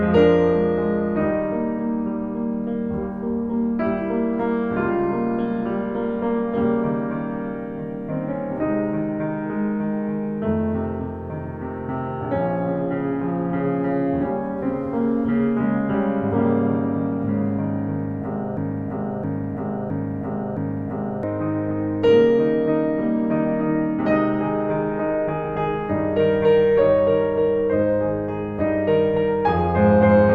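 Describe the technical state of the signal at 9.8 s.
At 9.8 s the music plays through intact, with no dropout, distortion or other fault.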